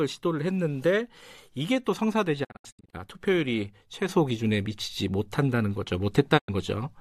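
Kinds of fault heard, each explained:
Digital broadcast dropout: The receiver stops getting decodable frames and mutes until valid ones return, so the programme in between is lost. Between 2.43 and 2.95 s the speech breaks into several short silent holes, each entered and left with a quick 20 ms fade. The longest is 72 ms, and together they remove about 288 ms spread over 480 ms, which fits a run of roughly 24 ms frames failing. A second, single hole of 96 ms occurs from 6.37 to 6.50 s.
Sudden gain jump: At 4.09 s the speech and its background noise step up together by about 7 dB with no ramp, and the raised level holds through the last part of the clip. Because the noise floor rises along with the speech, this is a change applied to the whole signal, not a change in how loudly the talker speaks. The likely cause is a digital gain setting or bit shift taking effect from one sample to the next.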